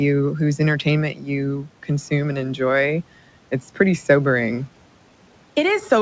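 At 1.12–1.29 s and again at 1.58–1.9 s there's speech cut by the noise suppressor: it takes quiet speech for noise and ducks it by about 11 to 12 dB, so those bits sound swallowed.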